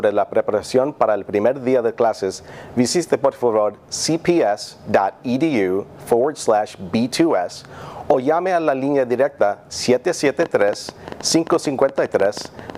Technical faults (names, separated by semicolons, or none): train of clicks